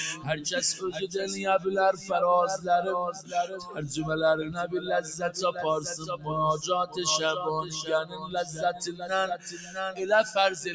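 A noise suppressor built for speech runs over the whole clip. It treats steady sound as noise. Level swings by roughly 15 dB. Attacks pass, held sound sinks, and the result pumps and thins. The call path also leaves nothing above 8 kHz.

The suppressor cuts sound harder at 0.94 to 1.15 s, 1.93 to 2.1 s, 3.12 to 3.33 s, 3.53 to 3.78 s, 5.98 to 6.27 s, 8.04 to 9.05 s and 9.37 to 9.76 s. Drops reach about 8 to 13 dB. Sustains sag and decays end early.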